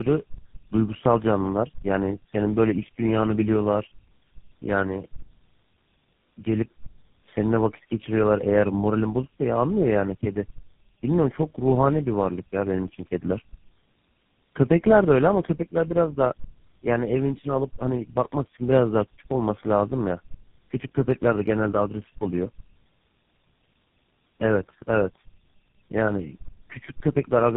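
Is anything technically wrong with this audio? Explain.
Yes. Tandem speech coding affects the whole clip. The speech sounds like it was squeezed through several low-rate mobile codecs in a row, which fits a chain like AMR-NB into GSM full rate and then GSM full rate again. Each coder re-encodes the previous one's damaged output, so errors stack up. The result is rough, muffled and warbly. Nothing is heard above 3.8 kHz, which gives it a narrow telephone tone.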